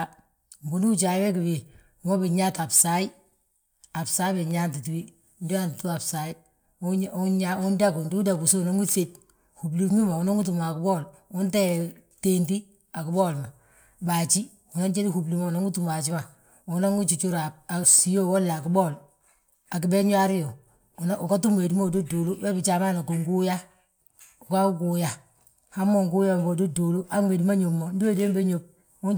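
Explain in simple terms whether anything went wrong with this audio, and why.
Nothing went wrong here.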